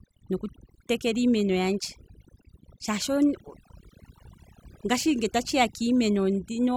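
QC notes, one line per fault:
Throughout, overdone noise removal: the noise reduction was set too hard for this speech, so any frequency band sitting close to its noise estimate gets pulled far down or shut off entirely. Between phrases the background collapses to near silence dotted with twinkling specks where isolated bands flicker on and off, and the quieter parts of the voice are stripped away with the noise.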